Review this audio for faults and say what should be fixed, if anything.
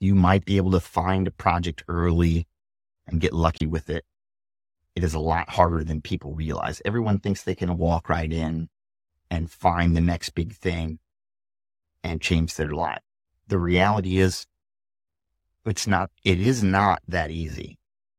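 A corrupt frame is muted from 3.58 to 3.61 s, between "and get" and "with it": a damaged compressed frame was rejected and replaced by an abrupt 36 ms silence, consistent with a single frame. Add error-correcting or checksummed transport, with packet-loss concealment, so damaged frames get repaired or interpolated instead of silenced.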